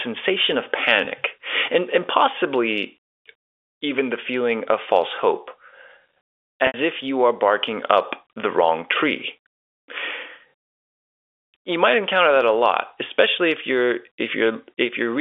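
At 1.05 to 1.07 s and again at 6.67 to 6.74 s there is packet loss with pitch repetition: the receiver loops the last pitch period to cover lost audio. The 20 ms gap sounds like a brief buzzy hold. The 70 ms gap outlasts the fade and drops toward silence before the speech cross-fades back, all within the narrow 300 Hz to 3.5 kHz telephone band.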